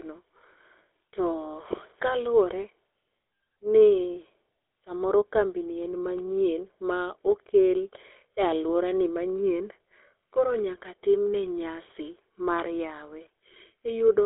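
From start to finish the speech sounds buzzy and gravelly, confined to a 150 Hz to 3.6 kHz line band with nothing above 3.8 kHz. This is GSM full-rate codec damage: a vocal-tract model fed by sparse, regularly spaced excitation pulses, consistent with a 13 kbps stream.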